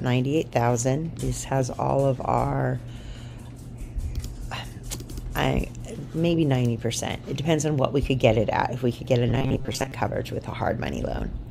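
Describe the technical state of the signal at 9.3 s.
At 9.3 s the sound has turned into a rigid, metallic buzz pitched at 134 Hz, lasting from 9.28 to 9.92 s, while the underlying audio only roughly shows through. This is robotic sound from repeated short buffers, likely caused by new audio arriving too slowly, so the playback repeats a chunk of about 7.5 ms to fill the gap, with most of that span made of repeats and the real audio skipped.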